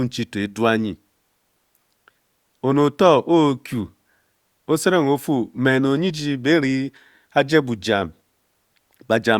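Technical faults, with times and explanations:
No technical faults can be heard anywhere in this speech recording. There is nothing here that needs a time or an explanation.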